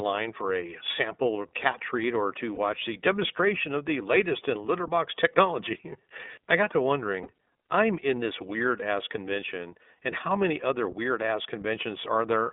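From the first syllable to the end, this speech runs through the iLBC codec. The band is squeezed to about 250 Hz up to 3.7 kHz, so there's no air or sibilant sparkle, and the damage is plainly audible: a slightly rough, synthetic edge from coding each frame's excitation on its own. The framing fits iLBC's 30 ms mode at around 13 kbps.

At 2.55 to 2.59 s, and again at 7.22 to 7.27 s, there's a lost iLBC frame, each one a single 30 ms packet. The decoder fills the hole by repeating the last pitch cycle with some noise mixed in, so instead of a dropout you hear a brief held, faintly buzzy vowel smear. Because each iLBC frame stands alone, the speech snaps straight back to normal right after each gap.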